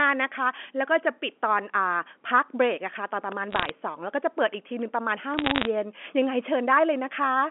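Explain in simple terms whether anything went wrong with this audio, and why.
Two short bursts of crackle, from 3.51 to 3.70 s and from 5.38 to 5.67 s, come from bit errors on a digital phone line. Over the narrow telephone-band sound, a small fraction of the transmitted bits were flipped, and each flip corrupts one sample; a hit on a high bit makes a sharp tick. Unlike a dropout from lost data, the speech keeps running unchanged beneath the ticks, with no gaps or muffled patches.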